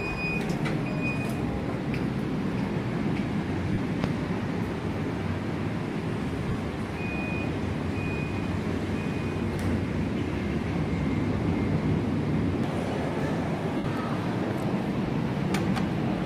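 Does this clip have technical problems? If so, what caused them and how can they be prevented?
Yes, there are lost LE Audio frames at 3.73 to 3.78 s, 6.48 to 6.55 s (scattered, longest gap around 40 ms) and 13.77 to 13.85 s. The LC3 decoder fills each gap by replaying the last spectrum with randomised signs and fading it, so the sound briefly smears into noise. A stronger, less congested Bluetooth link with fewer retransmission failures prevents it.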